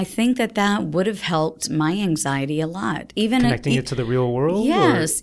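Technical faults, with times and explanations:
No technical faults can be heard anywhere in the speech recording; the signal stays stable and continuous throughout.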